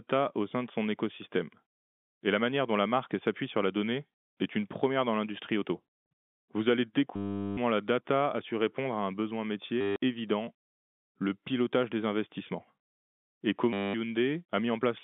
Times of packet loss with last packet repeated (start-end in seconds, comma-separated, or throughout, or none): 7.16-7.57, 9.81-9.96, 13.73-13.94